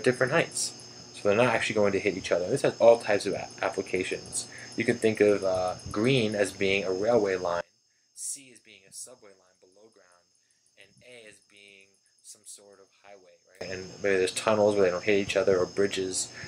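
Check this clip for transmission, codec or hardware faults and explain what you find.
There's one fault here. From 7.61 to 13.61 s the sound drops by about 24 dB, most likely one channel inverted: the shared content cancels when summed to mono.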